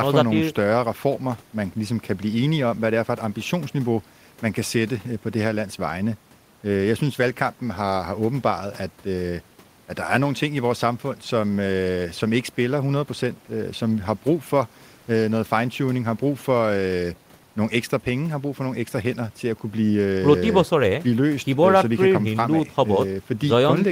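No technical faults can be heard anywhere in the speech, and the signal holds steady throughout.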